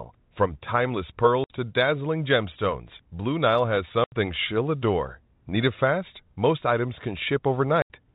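Packet loss filled with silence cuts holes at 1.44 s (60 ms), 4.04 s (80 ms) and 7.82 s (80 ms). Lost packets were replaced by dead air, and the lengths fit 20 ms packets. Each gap is abrupt, with hard edges, within narrowband G.711 telephone sound.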